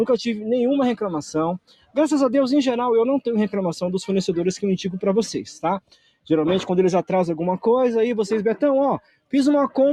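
A noise suppressor meant for speech stays on for the whole clip. This is a noise suppressor applied to music or sounds. It treats steady parts of the sound as noise. Level swings by roughly 5 dB. Held tones sink and attacks pass, so the sound pumps and thins.

The sound is cut by the noise suppressor three times: 1.59 to 1.97 s, 5.8 to 6.28 s, and 9.02 to 9.32 s. Each drop reaches about 18 to 19 dB. Sustained sound sinks and decays are cut short. Sharp onsets still come through.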